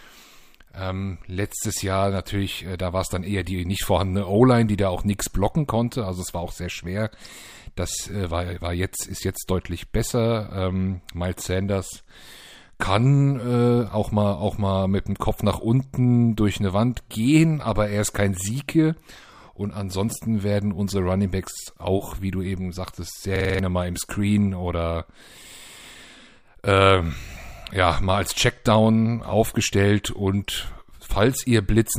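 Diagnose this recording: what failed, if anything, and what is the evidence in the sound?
A system hang loop at the driver and buffer stage: from 23.36 to 23.59 s, one 46.4 ms slice of speech repeats five times, a stutter at 21.5 Hz. The driver stalled while the hardware replayed its ring buffer, which fits a 2048-sample buffer, dropping about a fifth of a second.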